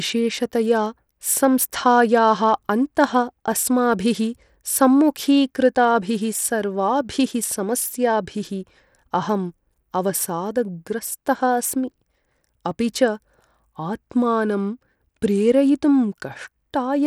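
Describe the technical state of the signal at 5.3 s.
At 5.3 s the speech carries the same degradation heard across the whole clip, most likely Bluetooth SBC compression. The codec splits the signal into a few wide sub-bands and allocates bits crudely. At a data rate that sounds like about 96 kbps, the upper bands are starved and the rest are coarsely quantised. The result is plainly audible: a gritty, grainy layer with unstable treble, and the content stops at about 20.4 kHz.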